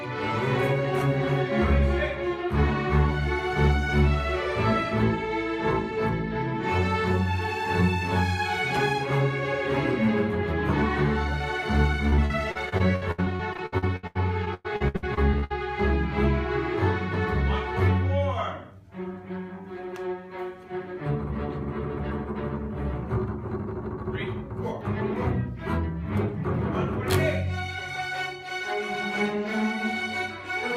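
Choppy, robotic sound runs from 12.09 to 15.52 s. This is repeated packet loss: about two dozen gaps of up to 102 ms are patched by stretching the preceding sound.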